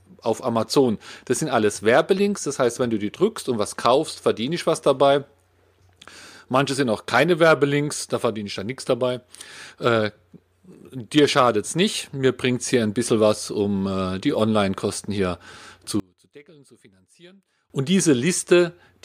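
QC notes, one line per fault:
16.00–17.70 s: one channel inverted. The speech nearly vanishes, dropping about 29 dB in mono. One channel's polarity likely flipped, cancelling the centred voice.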